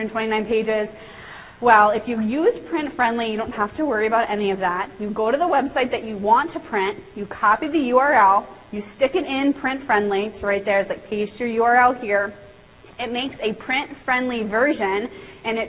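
No technical faults are audible.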